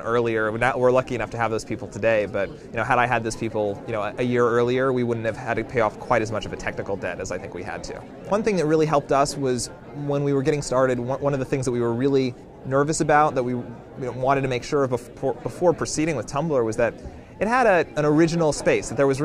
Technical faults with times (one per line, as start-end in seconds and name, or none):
none